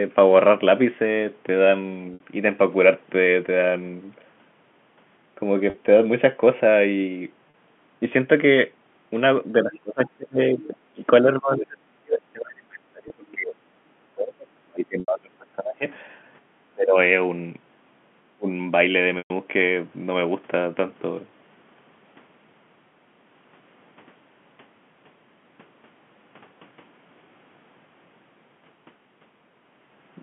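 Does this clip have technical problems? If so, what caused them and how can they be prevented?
Yes. Packet loss with pitch repetition: packets went missing and the receiver bridged each gap by repeating the last pitch period, at 2.14 s (60 ms), 5.70 s (40 ms), 7.50 s (40 ms), 13.08 s (20 ms), 15.00 s (80 ms) and 19.18 s (120 ms). The gap lengths fit 20 ms packets. Short gaps sound like a briefly held, buzzy tone, and the 120 ms gap fades toward silence before the sound returns. A larger jitter buffer, a steadier network path or forward error correction would reduce these losses.

Speech suppressed in double talk: the echo canceller likely could not tell the near talker from loudspeaker echo while both sides spoke, so it turned the signal down. The speech dips or breaks up between 9.63 and 15.85 s, by up to about 35 dB, and again at 16.74 to 16.97 s and 18.36 to 18.49 s, by about 25 to 30 dB. 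A canceller with better double-talk detection, or a headset, would prevent this.

Other side's voice leaking through: a far-end voice can be heard faintly at 9.74 to 10.11 s and 10.56 to 10.74 s, roughly 25 dB under the main speech, and more faintly at 15.29 to 15.35 s. This is likely the other side's voice from the talker's own loudspeaker reaching the microphone, which the canceller failed to remove. Using headphones or improving echo cancellation would stop it. All of this is carried over G.711 telephone coding, so the band ends below 4 kHz.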